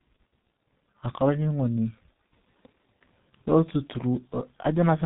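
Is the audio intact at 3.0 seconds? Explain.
No. G.723.1 codec damage is present at 3.0 seconds, as it is for the whole clip. This low-rate telephony coder works in 30 ms frames and rebuilds the voice from a coarse, slowly updated model, running here at about 6.3 kbit/s with heavy degradation. Nothing above 3.8 kHz survives, so the speech sounds muffled and hoarse, and consonants smear together instead of landing crisply.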